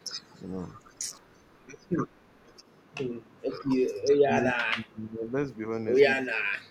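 From 0.0 to 3.48 s there is an echo leak: a faint copy of the speech, about 40 dB down, trailing the original by 365 ms. The likely cause is a far-end loudspeaker whose echo canceller let part of the pickup return. On a spectrogram it shows as a dim, shifted ghost of each harmonic pattern. Inside that stretch, at 0.98 to 1.17 s, the speech is suppressed in double talk. The level dips by around 10 dB for roughly 150 ms. The likely cause is the canceller mistaking overlapping talk for echo and ducking it. A brief notch appears in the waveform envelope.

The echo leak returns at 3.94 to 4.07 s, again 365 ms late and about 40 dB below.

Double-talk suppression then cuts much deeper, roughly 30 dB across about a second between 4.23 and 5.32 s, and again around 25 dB for about 300 ms at 6.25 to 6.6 s. The speech dips sharply, and the spectrogram shows energy vanishing.

In the final moments, from 6.62 s to the end, the echo leak comes back a little stronger at about 35 dB below the speech.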